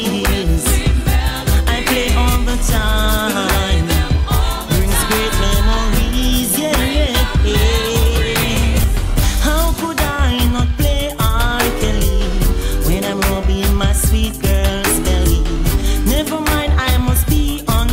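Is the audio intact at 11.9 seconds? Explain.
Yes, the audio is intact at 11.9 seconds, with no dropout, click, distortion or other fault audible at that moment.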